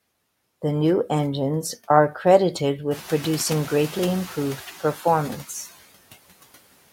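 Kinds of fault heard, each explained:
Noise suppressor artifacts: the suppressor pulls steady noise down by about 19 dB throughout, so the background dips between phrases.
Noise suppressor catching up: the room noise jumps up around 3 s and the noise estimate lags, so it's only cut by about 6 dB until it settles around 4.62 s.
Speech cut by the noise suppressor: from 4.8 to 5.05 s the suppressor mistakes some speech for noise, dropping it by up to about 9 dB, so roughly 150 ms sounds swallowed.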